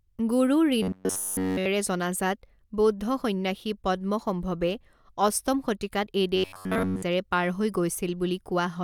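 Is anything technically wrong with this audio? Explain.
Yes. Robotic sound from repeated short buffers occurs from 0.83 to 1.66 s and again from 6.36 to 7.03 s. The likely cause is audio arriving too seldom, so playback fills the gaps by looping a tiny recent slice, about 10.7 ms long, across essentially the whole span. That loop imposes a fixed 93.8 Hz pitch, turning the speech into a rigid, metallic buzz that only loosely tracks the original contour.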